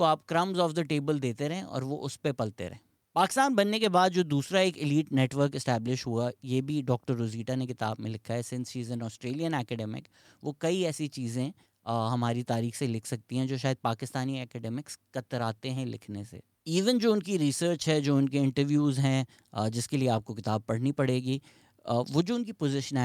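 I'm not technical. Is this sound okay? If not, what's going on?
Yes, no faults to hear.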